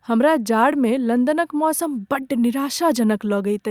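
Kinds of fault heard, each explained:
No technical faults heard.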